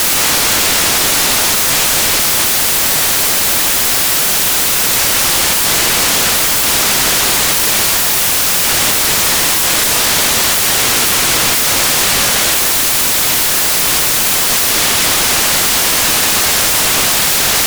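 Samples built from the wrong bytes affect the whole clip from start to finish, so the audio comes through as loud, harsh broadband noise. Each sample's bytes are being assembled wrongly, and the rapidly changing low-order bits end up as the dominant part of every value.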